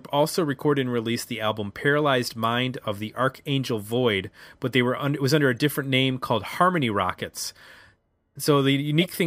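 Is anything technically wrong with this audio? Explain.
Yes, there are two decoded corrupt frames. The first, at 5.58 s between "it was under a" and "different name called", is faint. The second, from 9.01 to 9.09 s, is much louder. In both, flipped bits misplaced energy across several frames.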